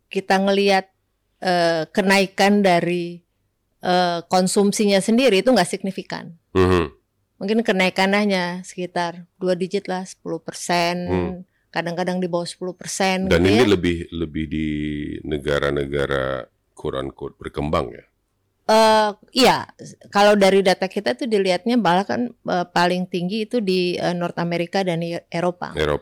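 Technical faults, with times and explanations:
Throughout: hard clipping. The speech is driven about 13 dB past what the signal path can carry, so around 2 percent of samples have their peaks sheared flat. The flattened tops add harmonics high in the spectrum, heard as a harsh fuzz on every louder syllable, unlike soft saturation's rounder, warmer distortion.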